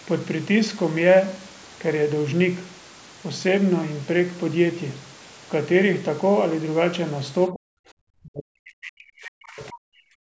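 From 7.5 to 7.9 s and 8.2 to 10.1 s, speech drops sharply, roughly 40 dB at worst, likely speech suppressed in double talk by the echo canceller.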